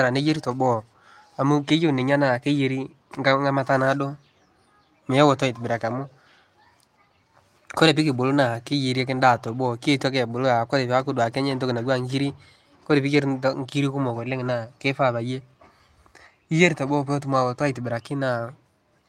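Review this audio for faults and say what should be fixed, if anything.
No faults turn up in this audio, so nothing needs to be fixed.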